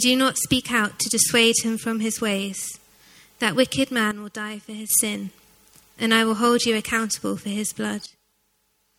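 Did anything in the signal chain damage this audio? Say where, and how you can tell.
Yes. There are two sudden gain jumps. At 4.11 s the level falls about 9 dB and returns at 4.90 s. From 8.06 s to the end it falls about 12 dB. Background noise drops with the sound at once. The likely cause is a digital gain change applied without a ramp.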